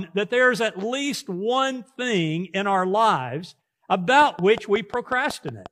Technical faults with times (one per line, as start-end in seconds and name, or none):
4.22-5.67 train of clicks